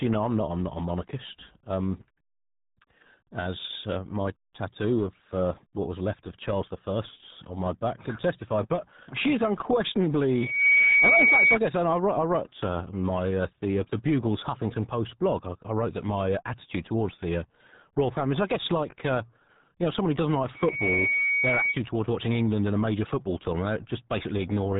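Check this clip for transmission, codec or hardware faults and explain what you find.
Two faults here: a heavy low-bitrate codec across the whole clip, and a short burst of feedback partway through.

The RealAudio 14.4 codec damage runs the full length of the speech. Nothing gets through above about 3.8 kHz, so everything sounds boxed-in and muffled, with that gargly, watery texture on the vowels. That's what you get when a dial-up-era codec squeezes speech into a tiny stream. The amount of smearing here fits something around 8 kbit/s, and it's heavy.

Then from about 10.31 to 11.59 s there's a loudspeaker feedback squeal, ending right before "guess I". A mic was picking up its own speaker, and at 2.2 kHz the loop had more than unity gain, so that frequency fed on itself. You hear a single tone swell up in under half a second and sit roughly 10 dB above the speech until it stops.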